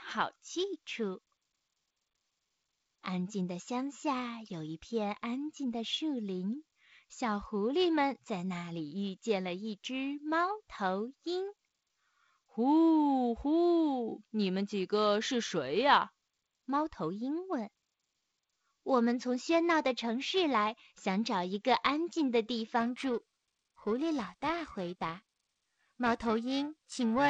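From about 22.80 s to the end, the speech picks up periodic clock jitter: something is wobbling the converter's clock at around 1 kHz, smearing sidebands onto everything, worst on the bright upper consonants. You get a rough, metallic edge, heard through the band-limited wideband telephone sound.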